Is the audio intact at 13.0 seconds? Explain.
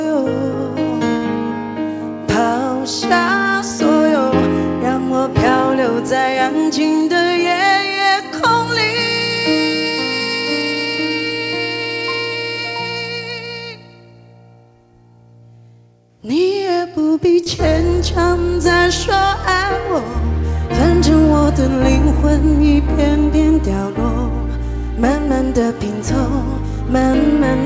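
Yes, the audio is intact at 13.0 seconds, with nothing there beyond the ordinary sound of a call codec path whose content stops at about 8 kHz.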